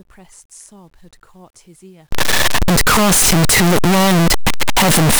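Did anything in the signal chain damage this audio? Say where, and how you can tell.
Yes. From 2.12 s to the end, the 8-bit samples were likely read with signed and unsigned mixed up at the sample-format conversion stage, flipping the top bit. Every zero crossing becomes a full-scale jump, so the speech turns into loud, harsh distortion with quiet stretches as loud as the rest.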